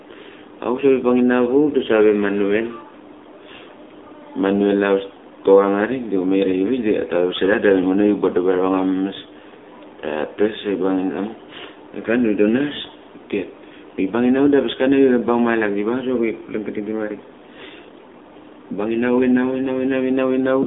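A speech recording carrying AMR narrowband mobile codec damage throughout: the band is confined to roughly 250 Hz to 3.6 kHz, and the voice sounds buzzy and synthetic, pointing to a low AMR-NB mode near 7.4 kbps. On a spectrogram, energy stops sharply below 3.6 kHz, leaving the upper region empty.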